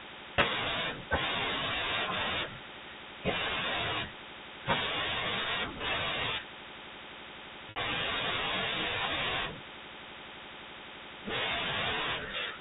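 Packet loss with pitch repetition occurs at 0.36 to 0.38 s and at 7.70 to 7.76 s. The receiver filled each gap by repeating the last pitch period. The 20 ms gap sounds like a brief held buzz. The 60 ms gap, which fits three lost packets, holds longer and starts to fade before the speech cross-fades back in.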